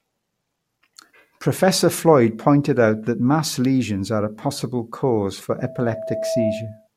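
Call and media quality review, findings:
Loudspeaker feedback squeal, 5.59 to 6.88 s. A steady 651 Hz tone swells over most of a second until it's about as loud as the speech. Probable component: a mic picking up its own speaker. The loop gain tops one at 651 Hz, so that frequency keeps feeding itself. Worth checking the echo canceller or the mic and speaker placement there.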